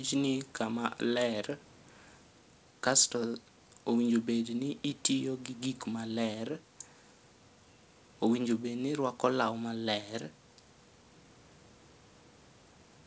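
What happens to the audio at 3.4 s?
Nothing goes wrong at 3.4 s: the speech there comes through intact, carrying only the ordinary band limit of the call path, which leaves nothing above 8 kHz.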